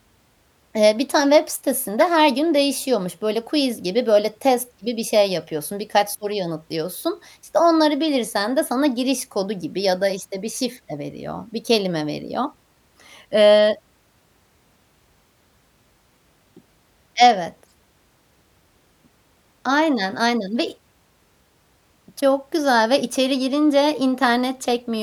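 A brief glitch at 1.97 s, between "bir tane web" and "her gün değişiyormuş", is a corrupt frame decoded: flipped bits across a few frames misplaced energy in frequency.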